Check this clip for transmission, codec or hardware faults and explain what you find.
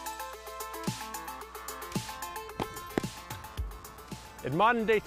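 One hardware fault runs through the whole clip: mains hum. A steady 60 Hz tone sits under the audio from start to finish, at around 25 dB below the signal. The power line has leaked into the signal path, most likely through a ground loop between connected equipment or a nearby transformer. Unlike broadband rumble or wind noise, it is a fixed, unwavering pitch that never drifts or follows the level of the audio.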